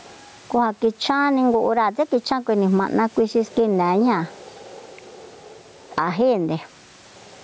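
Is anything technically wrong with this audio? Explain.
Yes. Gain pumping runs through the whole recording. The level swings by about 15 dB with the talker. Loud and quiet passages sit unnaturally close together, giving a squashed, flattened delivery. The likely cause is microphone gain set far too high, with a fast limiter or compressor clamping it down on each loud sound and releasing it in the gaps. The steady room noise sits well below the speech, and the top end stops at 8 kHz.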